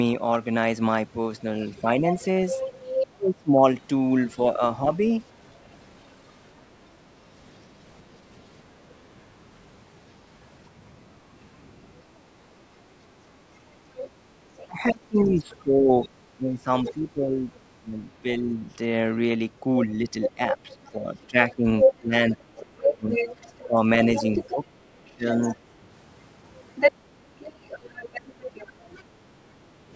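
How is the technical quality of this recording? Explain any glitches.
The recording has clear echo-control trouble from a speakerphone-style call: the far end's voice leaks in, the near talker gets ducked while both speak, and the background is briefly gated. The sound tops out around 8 kHz, in keeping with call processing.

Other side's voice leaking through occurs from 1.77 to 5.57 s, 13.99 to 17.55 s and 20.22 to 29.02 s. A second voice sits under the main talker at roughly 5 dB below it in the first and last stretches and roughly 15 dB below in the middle one. This is likely residual loudspeaker echo that the canceller failed to subtract. Unlike the other two faults, it adds sound rather than taking it away.

Speech suppressed in double talk overlaps the leaks, from 2.01 to 4.87 s and from 14.67 to 25.56 s. The near talker's voice dips and breaks into pieces, dropping by around 30 to 35 dB at worst. 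Roughly three-quarters of a second is affected in the first span and about five seconds in the second. The likely cause is the canceller mistaking simultaneous speech for echo and attenuating everything. What sets it apart is that the talker's own voice loses level.

Background gated by the echo canceller appears at 12.23 to 12.31 s, a blink of about 50 ms, and again from 29.09 to 29.93 s, lasting most of that span. Here the room tone, not the voice, sinks by about 6 dB and about 8 dB respectively, then recovers. The canceller clamped the microphone while the loudspeaker played. It is shallower than the double-talk suppression and affects only the ambience.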